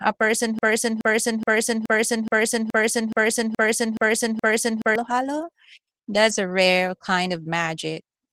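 From 0.59 s, just after "a person", the speech falls into a broken-record loop. A 0.42 s fragment repeats exactly ten times, back to back, until 4.96 s, and the speech resumes at "halo that's a rare". The likely cause is a stalled player or stream that kept resending its last buffer, so the speech meant for those seconds is lost. Unlike an echo, the repeats don't decay or overlap. Unlike a brief stutter, the loop runs for over four seconds.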